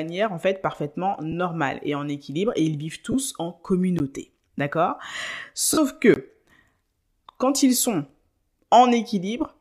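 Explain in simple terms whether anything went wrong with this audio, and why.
Two kinds of fault occur in this speech. Lost LE Audio frames, at 1.32 s after "en fait parfaitement", 3.12–3.14 s after "équilibre et ils vivent", and 5.73–5.78 s: the wireless link dropped audio, and the decoder filled in with a noisy smear. A block of digital silence at 3.99 s is heard as a brief tick or dip, and at 6.14–6.16 s as a short hole. In both, the sound cuts out and returns with no fade, likely because the playback buffer wasn't filled in time.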